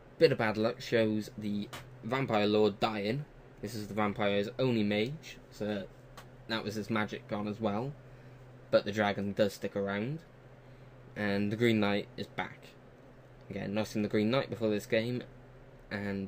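Nothing in the audio points to a technical fault at any moment. The sound holds steady throughout, with nothing to mark in time.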